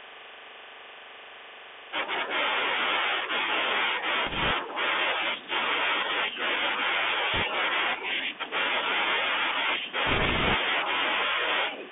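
The speech sounds thin and boxy from start to finish, with scratchy s sounds, grainy hiss under the speech, and gritty distortion on loud bright sounds. This is the Bluetooth CVSD headset codec: the band sits at about 300 Hz to 3.5 kHz, and the one-bit up-or-down steps, which fit a 64 kbps link, cannot keep pace with sharp peaks.

Rushing, crackly noise then breaks over the speech from 4.26 to 4.51 s, 7.34 to 7.43 s, and 10.07 to 10.56 s, roughest in the last burst. These are bit errors on a Bluetooth voice link. A few percent of the bits flipped, each nudging the level only slightly, so they make noise rather than loud clicks.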